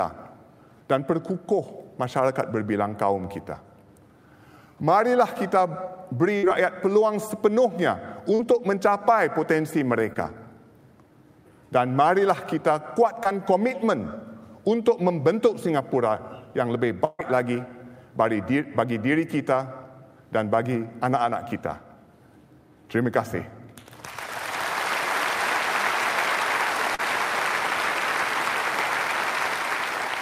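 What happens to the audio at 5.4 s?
Nothing goes wrong at 5.4 s; the audio carries on intact through that moment with no audible fault.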